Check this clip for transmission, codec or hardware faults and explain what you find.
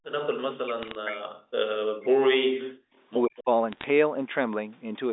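Three kinds of fault can be heard: speech suppressed in double talk, bit errors on a digital phone line, and a brief echo leak.

Speech suppressed in double talk occurs from 0.48 to 1.45 s, from 1.65 to 2.65 s, and from 3.25 to 3.48 s. The voice sinks sharply, by about 40 dB at its deepest in the first two stretches and about 35 dB in the last. The likely cause is an echo canceller that could not tell the near talker from loudspeaker echo while both sides spoke. It therefore turned everything down. The speech thins and drops away in pieces.

Bit errors on a digital phone line appear in two bursts, from 0.79 to 0.95 s and from 3.72 to 3.84 s. Only a small fraction of a percent of bits are flipped. Each flip corrupts a single sample on the A-law line. A hit on a high-order bit, or on the sign bit of a loud sample, throws that sample far off its true value. The result is a cluster of sharp ticks and crackle laid over the speech, which stays intact underneath.

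The echo leak is short, from 3.37 to 3.43 s, inside the last suppressed stretch. A faint copy of the voice returns about 116 ms late and about 25 dB below the direct speech. It is likely leakage from a loudspeaker whose echo canceller missed part of what its microphone picked up. It sounds like a brief, delayed copy of the voice.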